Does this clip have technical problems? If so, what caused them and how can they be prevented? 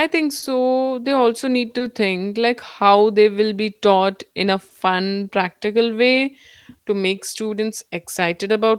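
Yes. Throughout the speech, small timing hiccups recur at uneven intervals. This is clock drift between sender and receiver: the sender's clock runs about 2 percent slow, so the receiver's jitter buffer keeps draining and has to be topped up. Prevent it by resampling adaptively to track the sender's actual clock rate.

At 0.39 to 0.44 s, 1.78 to 1.82 s and 4.69 to 4.73 s, a sound hangs on slightly too long, with a faint buzz or dip. Each is a short stall from a late packet: the buffer ran empty, so the receiver stretched the last sound by 30 ms at the first stall and 20 ms at the other two, then resumed with nothing lost. Prevent it with a deeper or adaptive jitter buffer.

From 2.83 to 8.54 s, the tempo feels faintly unsteady and slightly drawn out, with occasional hiccups. These are repeated timing corrections: the receiver keeps repeating short pieces to stay in step, playing at roughly 98 percent speed and adding around 150 ms in total. 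Prevent it with smooth time-stretching instead of abrupt inserted pieces.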